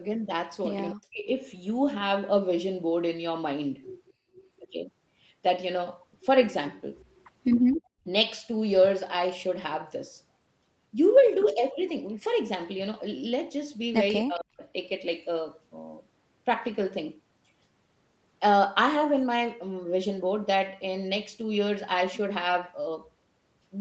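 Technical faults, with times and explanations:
0.91–1.26 s and 14.25–14.63 s, speech suppressed in double talk: the voice sinks sharply, by something like 40 dB at its lowest, and partly cuts out for about a third of a second in the first case and about 0.4 s in the second. The dips behave like an echo canceller clamping down while both ends talk at once. Unable to tell the near talker from loudspeaker echo, it likely attenuated everything together.
4.06–4.13 s, 6.99–7.24 s and 7.54–7.76 s, echo leak: faint, short scraps of a delayed copy of the voice surface, trailing the original by 262 ms and sitting roughly 30 to 35 dB beneath the speech, slightly louder in the last burst. The first is a brief blip, the others stretch to about a quarter second. This likely comes from a speakerphone whose echo canceller let some loudspeaker pickup slip back into the call.
7.76–8.05 s, background gated by the echo canceller: immediately after the last echo scrap, the room tone drops away by about 36 dB for roughly 300 ms, leaving a hole of near silence before the ambience returns. 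This is the echo canceller suppressing the microphone hard while the loudspeaker played, then releasing it. The abrupt, brief gap gives it away.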